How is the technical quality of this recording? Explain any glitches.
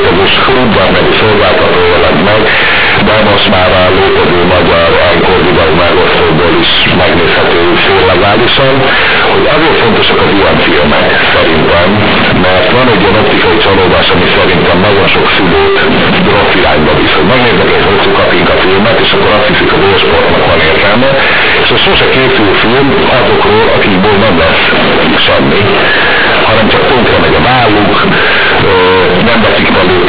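The technical quality is poor because of a decoding fault that runs through the whole recording.

Companded audio read as linear, throughout: A-law telephone bytes are played as raw 8-bit samples without expansion, so every sign change swings across half the output range. Quiet passages become as loud as peaks, giving harsh, buzzy distortion and heavy noise in pauses, all over a telephone band that stops at 4 kHz.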